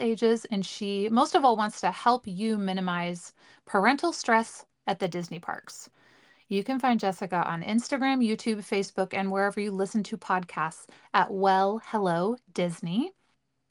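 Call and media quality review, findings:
Imaging from linear upsampling, 5.02 to 7.23 s, right after "minimize parental stress at". Faint metallic shimmer on sibilants, dulled top end. Probable component: resampler, which suggests a 24 kHz source raised to 44.1 kHz by straight-line interpolation. The weak filter leaves a mirrored spectrum copy in the 12 kHz to 24 kHz band, roughly 35 dB below the speech.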